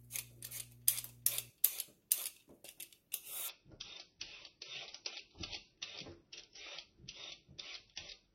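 Mains hum runs through this everyday-sound recording from 0.0 to 1.5 s, a steady 60 Hz tone with low harmonics, roughly 20 dB below the sound, coupled in from a ground loop or nearby transformer. From 3.49 s to the end, the adaptive stream switches to a lower bitrate: the treble abruptly disappears above 6 kHz and codec artefacts grow, with no gap at the switch. This fits a slowed connection forcing a drop from about 128 to 24 kbit/s MP3.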